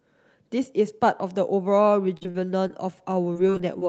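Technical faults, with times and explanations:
2.17–2.71 s, repeated packet loss (robotic sound): the speech turns choppy and robotic, with small pieces dropping out. Four gaps, longest 40 ms and about 100 ms missing in all, were each patched by stretching the preceding sound, so about a fifth of this stretch is synthetic fill.
2.45–3.52 s, jitter buffer slow-down: the speech drags slightly, running at about 94% speed with unchanged pitch, so sounds feel drawn out. The receiver repeated single pitch periods or bits of pauses, adding 71 ms in total, to rebuild its reserve of buffered audio.
3.12–3.83 s, repeated packet loss (robotic sound): a second, lighter burst of choppy sound and brief dropouts. Five gaps, longest 23 ms and 80 ms missing in all, were concealed by continuing the last sound, covering about 11% of the span.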